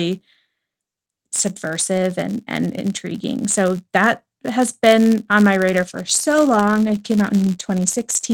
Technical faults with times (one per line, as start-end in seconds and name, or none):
0.00-8.33 filter restarted on every block
5.70-8.33 call bitrate drop